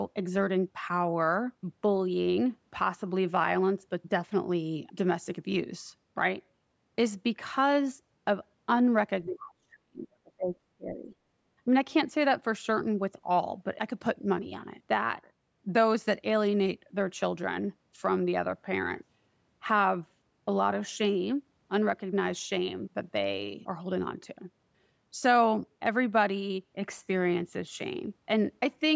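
Speech suppressed in double talk hits this speech recording from 9.26 to 10.55 s, with a drop of about 40 dB, then again from 10.76 to 11.13 s at about 25 dB. The likely cause is an echo canceller mistaking overlapping talk for loudspeaker echo and ducking both.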